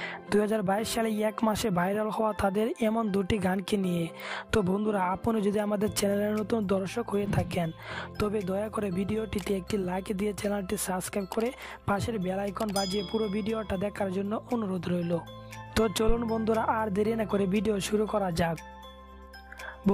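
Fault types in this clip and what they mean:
Phantom power thump: somebody's switched the supply on a live input, and that sudden DC step gets through the coupling capacitors as one deep low thud. You'll catch it at about 16.09 s. It peaks around -14 dBFS. It dies away quickly, with a decay of roughly 15 ms, and the whole bump is gone within about 70 ms. It's a short, dull knock rather than a lingering boom.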